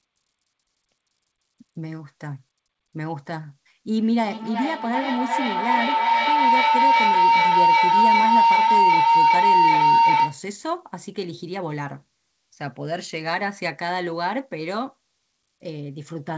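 Speech over a call, band-limited to 8 kHz as G.722 would be, hit by feedback howl from 3.9 to 10.47 s: two devices in one room looping, building to a tone around 1 kHz, about 9 dB above the speech, with a loop delay of roughly 0.4 s.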